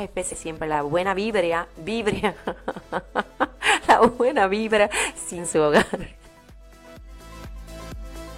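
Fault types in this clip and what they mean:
Damaged data in a compressed stream: two brief glitches break into the sound, one of about 64 ms at 0.28 to 0.35 s and a shorter one of about 44 ms at 5.34 to 5.39 s. Each comes from corrupted bytes in the encoded stream. The decoder can't make sense of the frames at those points, loses frame sync and searches for the next valid frame header.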